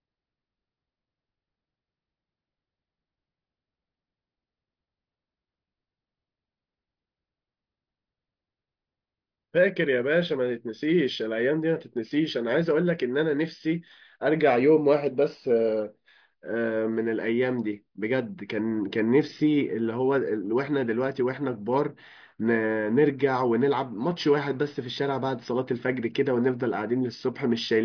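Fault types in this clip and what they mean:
No technical faults detected.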